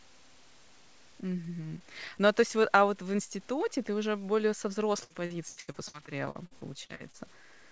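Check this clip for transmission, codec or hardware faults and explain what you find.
Two faults are audible in this speech clip: a gritty quantisation texture throughout, and a run of choppy, robotic concealment near the end. The call path's band limit, with nothing above 8 kHz as expected from G.722 at 64 kbps, is not a fault.

Low bit depth without dither runs the whole length. Quiet passages and word tails turn grainy, with error sitting roughly 30 dB below the signal, which fits 8-bit truncation. Because nothing randomised the rounding, the error tracks the waveform and reshapes with every syllable, and the faintest decays sputter or snap to silence. That is what separates it from ordinary background hiss, which stays steady whether anyone is talking or not. The likely cause is a stage reducing word length by chopping bits without dither.

Repeated packet loss (robotic sound) starts at 5.04 s, right after "ты уже более со", and lasts until 7.15 s. 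Over a dozen short holes follow one another, the longest about 81 ms, and about a quarter of the stretch is stretched-out filler. Each hole is patched by extending the last sound, so the voice turns choppy, with fragments missing. A single dropout would leave one clean gap. Here the holes recur in quick succession.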